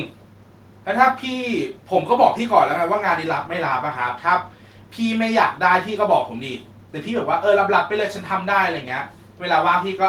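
No faults detected; the speech signal is continuous across the whole recording, with no audible defects.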